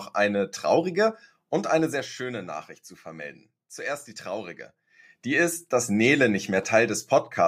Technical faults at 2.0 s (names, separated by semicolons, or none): zipper noise